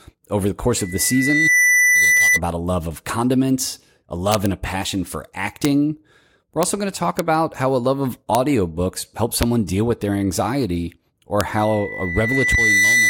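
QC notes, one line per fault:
0.79–2.40 s, loudspeaker feedback squeal: a 2 kHz tone swells over under a second to about 5 dB above the speech, as the microphone re-amplifies its own loudspeaker past unity loop gain. On a spectrogram it is a bright horizontal line at 2 kHz that thickens as it grows.
4.32–4.46, 5.65, 6.63, 7.19, 8.35, 9.43 and 11.41 s, integer overflow: speech peaks exceed full scale by at most about 1 dB and wrap to the opposite sign instead of limiting, giving sharp cracks. The waveform shows peaks jumping from top to bottom rail, and the spectrogram shows full-band vertical streaks.
11.55–13.09 s, loudspeaker feedback squeal: the same 2 kHz howl returns, building more slowly over about a second and a half to about 5 dB above the speech, and is still sounding when the clip ends. The spectrogram shows a steady 2 kHz line that strengthens to the end.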